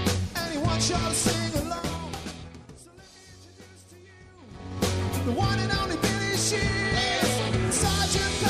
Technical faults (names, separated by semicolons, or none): zipper noise